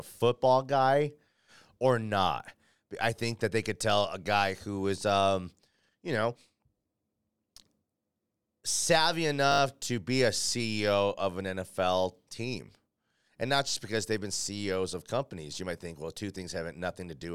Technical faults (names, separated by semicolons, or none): repeated buffer